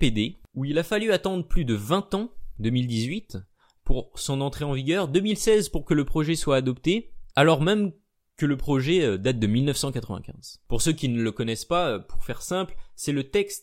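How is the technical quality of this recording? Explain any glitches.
Nothing in the recording stood out as a technical problem on listening, so there are no glitches to explain.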